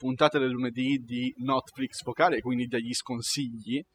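Throughout the speech, the gaps fall to an unnatural near-silence dotted with twinkling specks. This is overdone noise removal: the reduction was set so strong that bands near the noise estimate were cut away, taking quieter parts of the voice with them.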